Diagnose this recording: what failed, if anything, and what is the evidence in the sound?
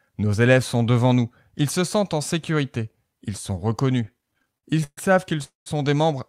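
Repeated stalls (stutter) from the network and jitter buffer, between 4.05 and 4.99 s. The speech halts 16 times, with about a third of that span (314 ms) filled by continued sound and the longest gap 133 ms. Late packets kept draining the buffer, so the receiver stretched the last sound each time. Nothing is lost, but the speech drags.

Call audio freeze at 5.44 to 5.68 s. The sound holds as a fading continuation of the last sound, then falls to silence for about 150 ms before resuming where it stopped, 221 ms late. The likely cause is packets held up in transit, emptying the jitter buffer.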